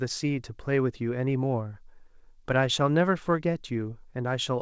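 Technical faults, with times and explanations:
No technical faults heard.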